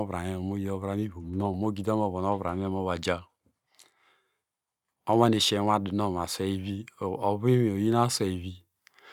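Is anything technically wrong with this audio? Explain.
No, nothing is technically wrong with this audio.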